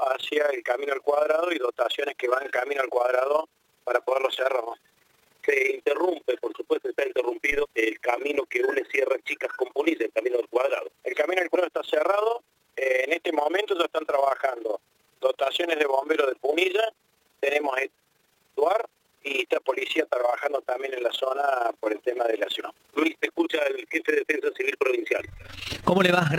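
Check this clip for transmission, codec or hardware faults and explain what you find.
Two faults are present: a steady flutter across the whole clip and a single thump partway through.

Throughout, the audio carries a fast, rough tremolo, a flutter around 20 times a second with level swings of about 11 dB. This is overlap-add ripple: framed audio was recombined with overlapping windows whose gains don't sum evenly, so loudness dips once every frame.

At 7.52 s there is a brief low thump while the sound carries on unchanged. This is a DC step: the waveform's zero line jumps suddenly, then the offset drains away as a 2 Hz high-pass pulls it back to centre.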